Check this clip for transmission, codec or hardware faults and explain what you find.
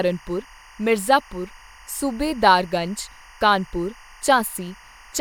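There is one fault: timecode bleed, running through the whole clip. Behind the speech sits a steady chirping warble that flips between pitches near 1 kHz and 2 kHz, roughly 25 dB below the voice. The chirp rate fits 23.976 fps linear timecode. That square-wave code is leaking across from an adjacent track or cable into the audio path.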